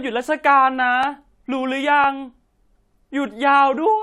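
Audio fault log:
1.03–3.05 s clock drift buffer slips: about three regular clicks roughly 1.01 s apart as a short block of samples, around 15, is dropped or repeated, likely from two clocks differing by a few hundred ppm. Each shows as a thin vertical broadband line on a spectrogram and a small step in the waveform.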